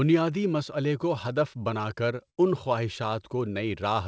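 From 2.30 to 2.39 s the speech briefly smears into a held, fading tail and then jumps ahead. This is a burst of packet loss: consecutive packets never arrived, so the receiver stretched the last sound for about 73 ms and roughly 80 ms of speech is skipped. The call path cuts off everything above 8 kHz throughout.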